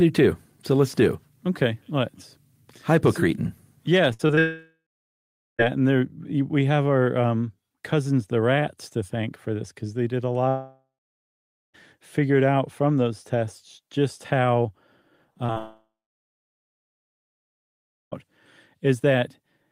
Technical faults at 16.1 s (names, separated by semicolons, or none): long network dropout